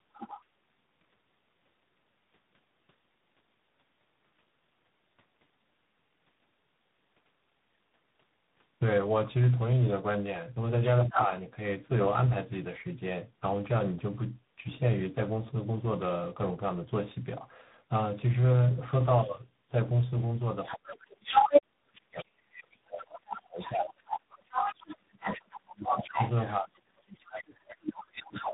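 Tandem speech coding runs through the whole clip. The speech sounds rough, muffled and warbly. Nothing reaches above 3.8 kHz. This fits three speech codecs in a row, each recoding the damaged output of the one before.

The other side's voice leaking through first appears from 0.13 to 0.41 s, at about 15 dB below the speech. It returns from 10.81 to 11.24 s at roughly equal level. From 20.64 to 21.62 s it sits about 5 dB above the speech. From 22.16 s to the end it stays about 5 dB below. These are likely loudspeaker echo that the canceller failed to remove.

Speech suppressed in double talk overlaps those same moments. From 11.06 to 11.3 s the speech briefly dips, by up to about 10 dB. From 20.74 s to the end it drops hard, by up to about 35 dB, for about seven of those last eight seconds. The likely cause is an echo canceller that could not separate the two talkers. It turned the wanted speech down along with the echo.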